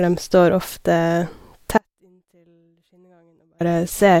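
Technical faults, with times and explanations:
1.78–3.60 s, audio dropout to a faint residue: the incoming signal was likely lost for about 1.8 s while the path after the break stayed live, so the speech cuts off abruptly, leaving only faint sound roughly 40 dB down, then snaps back mid-flow.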